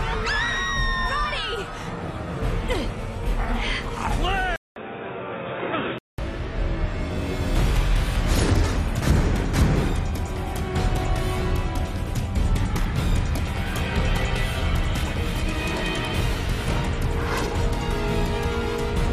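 From 4.56 to 6.18 s, after a 200 ms silence, the sound turns boxy with nothing above 3.8 kHz, drops a few decibels and gains a faint new hiss. A filter wouldn't add that gap or noise floor; the input likely switched to a poorer device.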